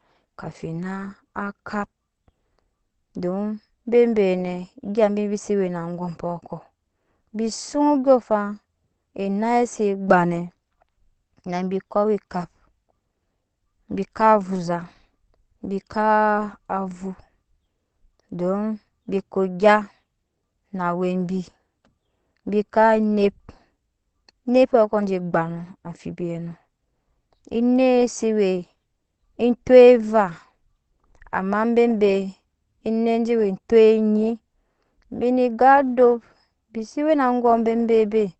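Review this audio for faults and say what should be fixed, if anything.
Throughout the speech, nothing is present above about 8.5 kHz, and the sound is muffled and hoarse with plainly audible coding damage. This is likely Opus compression in its speech (SILK) mode at wideband, which fits a bitrate near 16 kbps, where the encoder narrows the band and models only the voice. Encode at a higher bitrate so Opus keeps full bandwidth.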